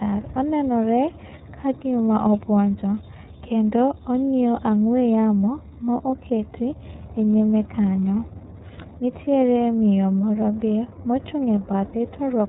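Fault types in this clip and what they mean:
iLBC codec: the speech sounds band-limited below 4 kHz and plainly rough and synthetic, from a narrowband VoIP coder handling independent frames, consistent with 30 ms framing.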